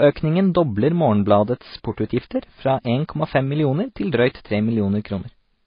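Throughout the speech, nothing reaches above 5 kHz, and two layers of smeared, swirly coding artefacts sit on top of each other. That points to transcoding between lossy codecs, likely a low-bitrate MP3 re-encoded as AAC-LC. The second encoder wasted bits on the first one's damage.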